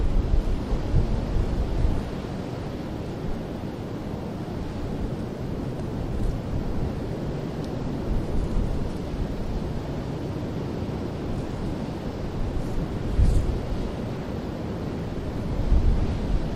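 Listening to this recording of everyday sounds, nothing stood out as a technical problem at any point.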